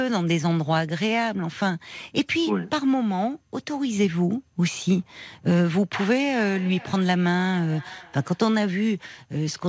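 Feedback echo between two devices, 6.35 to 8.53 s: one device's playback re-enters the other's microphone, so speech repeats roughly every 0.4 s, about 21 dB below it.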